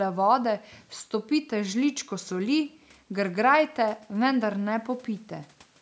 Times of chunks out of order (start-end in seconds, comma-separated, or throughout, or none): none